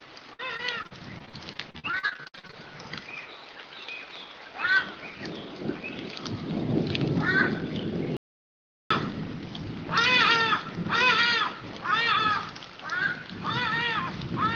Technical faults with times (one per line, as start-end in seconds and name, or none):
0.33-2.55 repeated packet loss (robotic sound)
8.17-8.90 audio dropout to silence